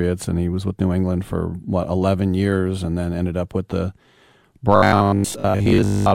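Robotic sound from repeated short buffers affects this speech recording from 4.76 s to 6.14 s, a rigid metallic buzz at 50 Hz. The likely cause is late audio, with one 20 ms block looped in its place for roughly two thirds of that stretch.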